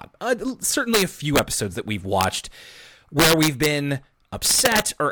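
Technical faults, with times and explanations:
0.94 to 1.39 s (ending just before "episodes that we've"), 2.21 to 2.24 s (just after those words), 3.20 to 3.66 s and 4.46 to 4.80 s, integer overflow. The speech peaks were pushed about 2 to 6 dB past the integer limit. Instead of being limited, they wrapped to the opposite sign. That produces cracks on the loud peaks, sharper than clipping.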